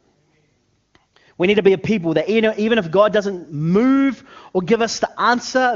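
No faults in this speech clip; the speech passes through the HD Voice (AMR-WB) path at 23.85 kbit/s, with any coding damage faint at most.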